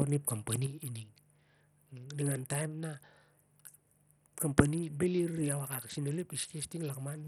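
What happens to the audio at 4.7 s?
At 4.7 s the speech sits inside a level drop that began at 0.66 s and runs to the end. This is most likely one channel dropping out. After the mono sum, the shared content falls abruptly by about 6 dB, and anything carried only in that channel is gone.

The same moment carries Bluetooth SBC compression, present throughout. The treble thins and flickers. A gritty, aliased roughness rides on the speech. This likely comes from starved upper sub-bands and coarse quantisation, and the heavy damage fits a low bitrate near 64 kbps.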